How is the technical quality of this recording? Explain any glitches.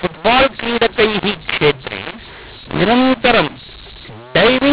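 The recording has a serious fault that runs through the entire clip: a mu-law and A-law mix-up. The speech was encoded with G.711 mu-law but decoded as A-law. The two logarithmic scales assign their 8-bit codes differently, so every sample is mapped to the wrong level. Some samples come out louder and others quieter, and the near-silent ones are pushed well above zero. The speech sounds harsh, gritty and distorted, and the pauses are filled with hiss instead of quiet. On a waveform, the gaps that should be flat show a thick band of noise, and the peaks look uneven. On a spectrogram, broadband smearing fills the band up to the 4 kHz ceiling of the 8 kHz telephone rate, and it carries through the silent stretches.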